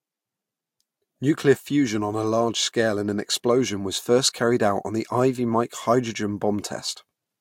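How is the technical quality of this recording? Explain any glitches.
No glitches can be heard anywhere in this recording.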